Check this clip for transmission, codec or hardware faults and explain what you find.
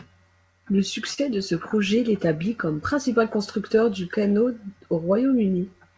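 Three transmission faults are present, all tied to timing. The speech also carries call-codec coloring, with nothing above 8 kHz, which fits G.722.

Clock drift between sender and receiver runs through the whole clip. The sender's clock runs roughly 2 percent slow, so the jitter buffer keeps draining and forcing small corrections.

A short stall from a late packet occurs at 1.14 to 1.19 s, just before "de ce projet l'établit". The buffer ran empty, so 37 ms of held sound was filled in, with nothing lost.

Repeated timing corrections run from 2.66 to 5.74 s, after "de ce projet l'établit". The receiver slows playback to 98 percent, adding about 70 ms.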